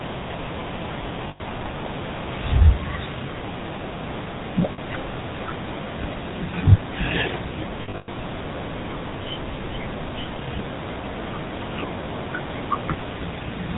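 Throughout, the speech carries the buzzy, gravelly roughness of the GSM full-rate codec. Its narrowband coding leaves a spectrogram bare above 4 kHz. At 1.28 to 1.41 s, lost GSM frames hold the sound as a metallic ring for 120 ms while the last good frame repeats. The waveform shows an oddly regular stretch there. The same happens briefly at 4.72 to 4.79 s, for 60 ms. From 7.82 to 8.15 s, 240 ms of gaps are scattered across about a third of a second, and the longest run is roughly a tenth of a second. These appear as repeated smeared bands on the spectrogram.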